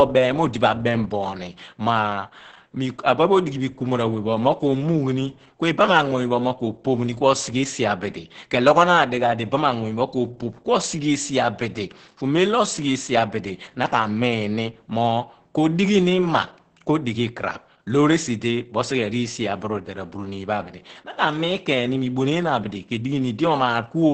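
Throughout the speech, Opus voice compression in its SILK linear-prediction mode, consistent with a bitrate near 10 kbps, codes the excitation coarsely and drops everything above 8.7 kHz. The voice sounds muffled, hoarse and slightly robotic, with heavy codec damage.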